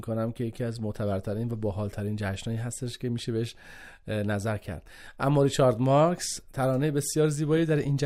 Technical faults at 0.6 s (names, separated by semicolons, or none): none